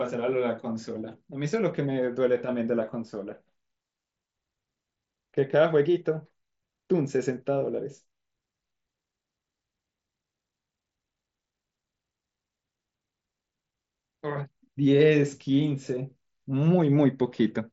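No technical faults turn up in this speech recording, which carries the band-limited character of a wideband Bluetooth mSBC headset link, with nothing above about 7.7 kHz.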